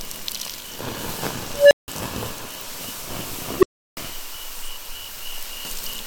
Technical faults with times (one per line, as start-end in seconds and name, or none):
0.62-0.64 repeated buffer
1.52-1.88 unstable filter
1.98-2.00 repeated buffer
3.28-3.30 repeated buffer
3.59-3.97 unstable filter